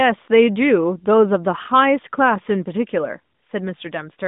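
No technical faults can be heard in the speech, which comes over an AMR narrowband mobile codec path behaving as that channel should, with a band of about 150 Hz to 3.7 kHz, nothing above 3.8 kHz, and only a light touch of coding that fits the codec's 12.2 kbps mode.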